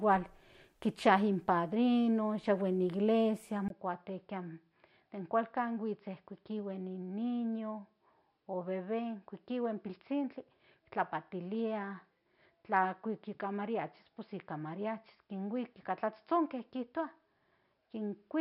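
At 3.68 s, just after "in iglesia", a 20 ms gap precedes a change in the sound. From there to the end, nothing is present above 5.4 kHz, the level sits a few decibels lower, and a faint new noise floor appears. This is most likely the input switched to a poorer device.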